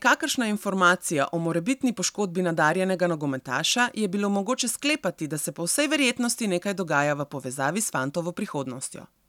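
A single sharp click at 0.90 s is dropped samples: a tiny fraction of a millisecond likely went missing, so the waveform jumps abruptly to a later value.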